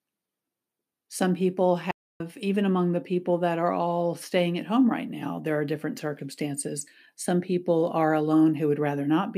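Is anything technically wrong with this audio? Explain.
Yes. At 1.91 s the speech cuts to silence for about 0.29 s, then resumes at 2.20 s with "even among the people". This is a playback stall, likely the player running short of data or its thread being blocked, so output halted until it recovered.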